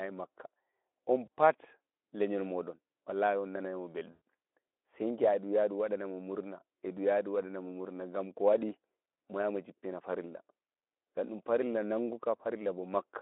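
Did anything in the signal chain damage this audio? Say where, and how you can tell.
Yes. At 1.26–1.28 s and 4.11–4.19 s the speech smears into a buzzy tone or coloured noise that fades. This is VoIP packet loss concealed by the speech codec, at the network stage: the decoder extrapolated the gaps, which fits one and then five lost 20 ms frames.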